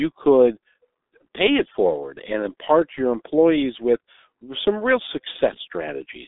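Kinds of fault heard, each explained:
G.723.1 codec: The speech has passed through G.723.1, a low-rate telephony codec that models the voice in 30 ms frames at about 6 kbit/s, which fits the 6.3 kbit/s rate heard here. The line band runs from 250 Hz to 3.7 kHz and nothing survives above 3.8 kHz, so the sound is muffled and thin at both ends. Damage is heavy: a hoarse texture and smeared consonants run through the whole clip.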